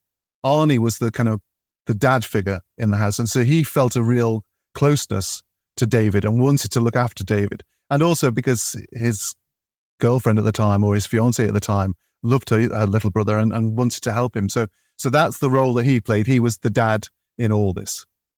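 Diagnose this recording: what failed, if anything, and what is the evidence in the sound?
Nothing failed in this recording.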